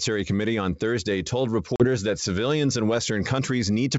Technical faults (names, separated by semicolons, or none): packet loss on an ADPCM call